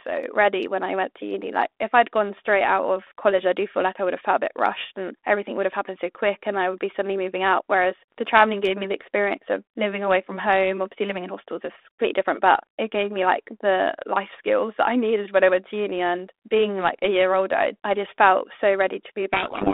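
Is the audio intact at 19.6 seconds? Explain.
No. A codec payload misread runs from 19.33 s to the end of the clip at 19.73 s, beginning right after "I just felt so". The two ends disagree on the bit order inside each G.726 code word, so the decoder takes every sample's prediction difference from the wrong bits and steers its adaptive predictor astray. The frames still decode, but the speech at 19.6 s is buried in harsh, rasping distortion.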